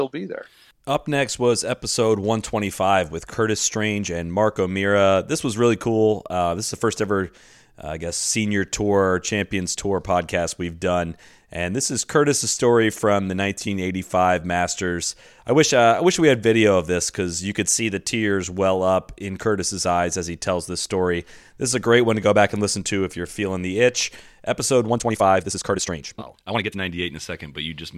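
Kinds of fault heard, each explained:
Time-stretched section: From 24.85 to 26.79 s the speech suddenly runs about 1.66 times faster, yet its pitch stays put. It sounds rushed. Software likely squeezed this stretch to fit a set length by dropping short pieces.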